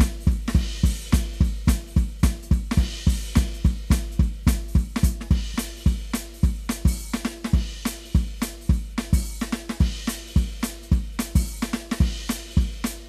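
The music signal shows no audible technical fault at any point in the clip.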